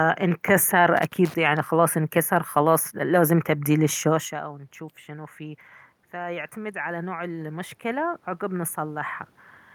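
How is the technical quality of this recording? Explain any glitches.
Two glitches stand out in the speech.

From 0.97 to 1.34 s there is loose connector crackle. A worn or dirty contact keeps making and breaking as it shifts. That chops the signal into fragments. It is heard as a short, irregular burst of scratchy crackle.

From 4.11 to 9.09 s the automatic gain is rising. Around 4 s the talker moves away, and the input drops by about 18 dB. The gain control reacts to the quieter input. It slowly lifts its gain by about 10 dB. The voice and the room noise swell together over those five seconds.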